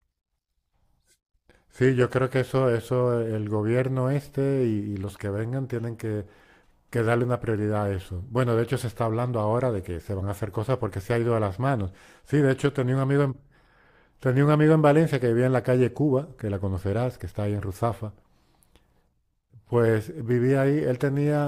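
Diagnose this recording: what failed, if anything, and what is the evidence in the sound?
Nothing in the speech signal points to a failure at any stage of the chain, from capture and conversion through transmission, storage and playback.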